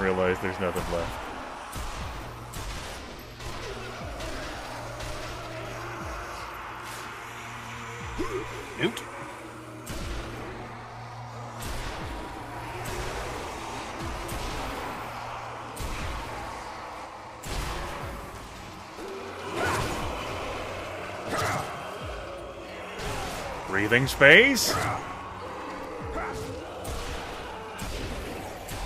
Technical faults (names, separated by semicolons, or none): none